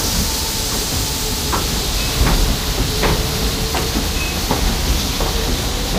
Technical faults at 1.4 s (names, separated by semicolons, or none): none